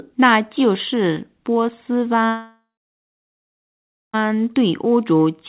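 From 2.26 s the sound smears into a fading buzz, then about 1.5 s of near silence until 4.15 s, when audio resumes with that stretch lost: likely a long network dropout. The waveform tapers to a flat line; the spectrogram smears, then goes blank.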